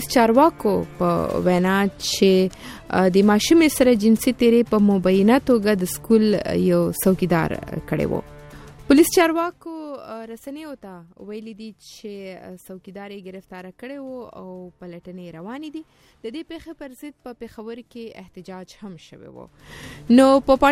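No technical faults can be heard in this clip, so there is nothing to place in time order.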